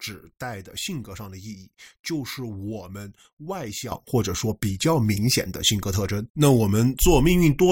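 A sudden gain jump at 3.92 s raises the speech and its background noise together by about 12 dB, and that louder level holds to the end. The step is instantaneous, with no ramp, so the likely cause is a digital gain setting applied from one sample to the next.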